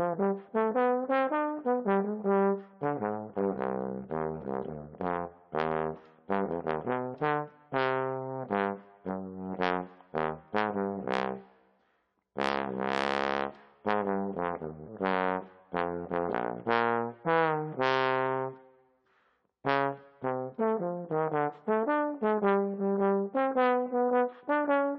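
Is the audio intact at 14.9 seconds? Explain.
No. From 14.85 to 14.89 s there is damaged data in the compressed stream, a burst of corrupted bytes the decoder cannot parse cleanly. It misreads those frames, loses sync and hunts for the next valid frame header, producing a brief chirp, squawk, click or short hole about 40 ms long. On a spectrogram this appears as a narrow vertical disturbance breaking the surrounding pattern. On the waveform it shows as a short, abrupt disruption.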